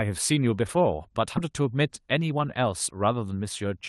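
Speech, carried over a WebRTC call path whose Opus coding cuts off the sound above 12 kHz. A skip ahead occurs at 1.37 to 1.39 s. Roughly 0.4 s of audio is dropped with no fill, and the two sides join almost directly. From 1.52 to 2.59 s comes a jitter buffer speed-up. The speech runs about 6% fast at unchanged pitch, which sounds slightly hurried. Tiny pitch-period pieces are trimmed repeatedly, roughly 70 ms in total, to shrink excess buffered delay.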